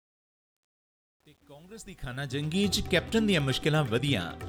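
Truncation distortion on a fade runs from 0.0 to 2.69 s. The fade-in keeps too few bits and has no dither, which fits about 9 bits. It is gritty, worst until 2.2 s.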